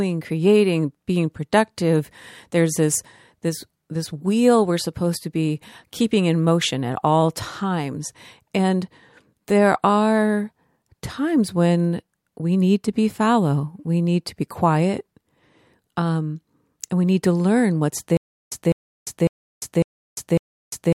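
At 18.17 s, right after "need to learn what's", the speech falls into a stutter with silent gaps. A 203 ms fragment repeats every 551 ms with 348 ms of digital silence between, likely a stalled stream replaying its last buffer. This continues to the end. The waveform shows identical blocks separated by flat, near-silent stretches.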